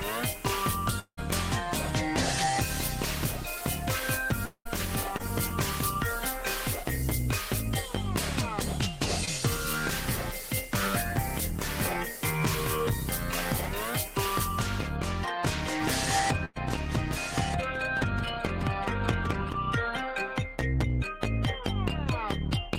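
A recording of everyday sounds with a handful of transmission problems. From 0.99 to 1.19 s and again from 4.45 to 4.67 s the sound gives way to a fading buzz-hiss continuation of what came just before, which then drops to near silence for the last 70 to 80 ms before the audio resumes further on. About 180 ms and 200 ms of real material are simply gone. That pattern is most likely a long network dropout, where nothing arrives and the receiver can only stretch the last sound until it runs out. There are two much shorter glitches at 5.17 to 5.21 s and 9.25 to 9.29 s, each a quick smear where roughly 20 ms went missing. Those are short concealed packet loss: the decoder patches the tiny hole by extending the preceding sound and blending back in, so you hear a brief wobble rather than a gap. From 15.80 to 19.51 s there's a doubled audio track, with a second full-band copy about 10 dB down trailing by around one and a half seconds. 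It has no room colour at all, and it cuts in and out abruptly at those edges, which points to a second capture path or an edit overlap rather than any real echo. Inside that stretch, at 16.45 to 16.57 s, there's a burst of packet loss of about 100 ms: the last sound is held and fades, then the audio picks up again with that chunk missing.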